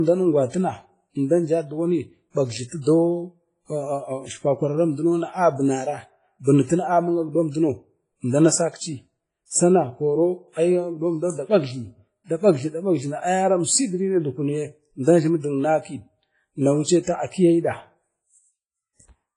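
From start to finish the speech carries heavy transform-codec damage, likely WMA compression: a washy, ringing smear around each syllable, and a hiss that swells and sinks with the level. Nothing reaches above 10.3 kHz, and the weakest detail has been stripped out, which fits a bitrate near 24 kbps. Unlike MP3's short, sharp pre-echo, the noise spreads over tens of milliseconds, so it sounds blurred rather than crisp.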